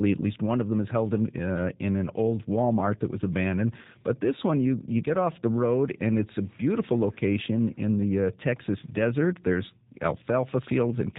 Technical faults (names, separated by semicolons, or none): G.729 codec; VoIP packet loss concealed by the speech codec